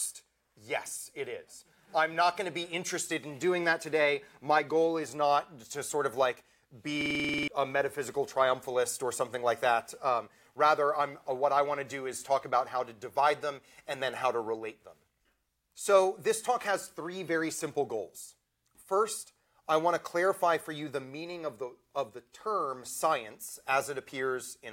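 At 7.01 s the system stalled while the audio hardware kept replaying its ring buffer, a system hang loop. One 46.44 ms slice, which fits a 2048-sample buffer, repeats ten times at 21.5 Hz until 7.48 s. The result is a rattling buzz in place of roughly half a second of sound.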